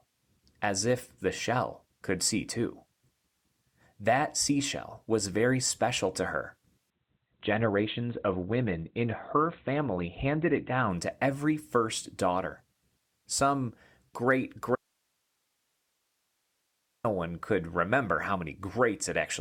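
From 6.9 to 10.9 s, between "very special to her" and "to every first daughter", the speech switches abruptly to a duller sound. This is an adaptive stream at a lower bitrate. The connection slowed, so the player fetched a leaner version. Nothing remains above 4.4 kHz, and codec artefacts grow. The change points to a drop from roughly 64 kbit/s to about 16 kbit/s Opus. There is no gap either way.

At 14.76 s the speech cuts out mid-flow. This is an audio dropout to a faint residue. It lasts 2.29 s, until 17.04 s, just before "one could remember how". The gap holds only hiss, far below the speech level. The cut is abrupt, not a pause or fade. The likely cause is that the wanted signal was lost while the path after the break stayed live.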